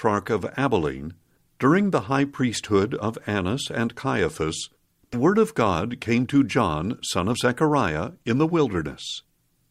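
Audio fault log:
3.00–3.03 s, 5.13–5.17 s, 7.32–7.36 s: compressed frames skipped. Sound jumps ahead roughly 40, 70 and 40 ms, multiples of a likely 10 ms frame.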